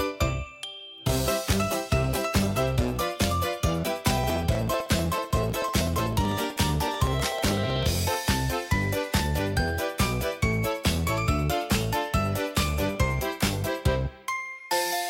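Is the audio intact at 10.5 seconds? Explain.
Yes, the audio at 10.5 seconds is intact, with no dropout, click, distortion or other fault at that moment.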